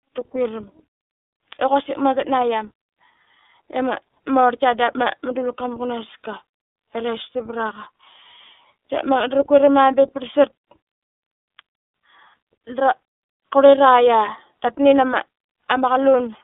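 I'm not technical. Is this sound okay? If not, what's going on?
No. The speech runs through the iLBC codec, a low-bandwidth phone-call format, for the whole recording. It keeps only the range of a traditional phone line, roughly 300 Hz to 3.6 kHz, so the speech sounds thin and boxy with no crispness on the top end. The codec rebuilds the sound in 30 ms chunks, each handled on its own, which leaves a plainly audible rough, slightly artificial quality throughout.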